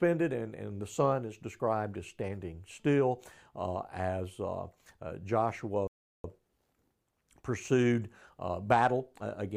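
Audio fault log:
5.87–6.24 s, rebuffering stall: the speech halts into silence for about 0.37 s because playback ran out of downloaded data and waited for more. Unlike a dropout, nothing is skipped; the speech picks up exactly where it stopped, so the pause only adds time.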